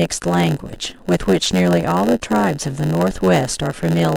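A speech clip with a steady buzz near 92 Hz running through its whole length, and the talking drags at about 0.92 times normal speed while timbre stays natural. This is a padded block size mismatch: each short block is zero-filled to a longer read size, inserting a gap every block.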